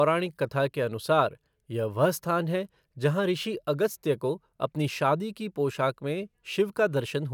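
No technical faults can be heard in the recording.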